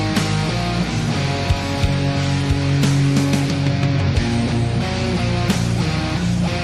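No technical faults can be heard in this recording, and the signal holds steady throughout with nothing that points to trouble in its capture, processing or playback.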